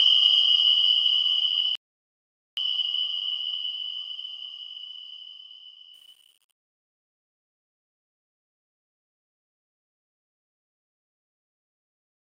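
A rebuffering stall hits the audio at 1.75 s: the sound drops to silence until 2.57 s, then picks up at exactly the point where it stopped. Nothing goes missing, so the gap adds 0.82 s of time to the clip. That is what separates it from a network dropout or packet loss, which would skip ahead and lose material. Here the player simply ran dry and waited for more data. From 5.94 s, a fade out carries truncation distortion that worsens toward the end, at 12.35 s. As the level falls, the fade or gain stage rounds each sample to too few steps without dither, consistent with roughly 9 bits. The tail therefore turns gritty. A clean fade would just get quieter, and a noise gate would cut off sharply instead of crumbling into coarse steps.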